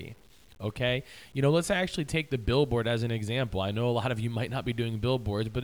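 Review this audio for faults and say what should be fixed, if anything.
A grainy distortion runs through the whole speech, following each sound and roughening quiet passages. Quantisation error sits only about 35 dB below the signal. The likely cause is low bit depth without dither, around 8 bits, truncated. Keep 16 bits or more, and dither before reducing.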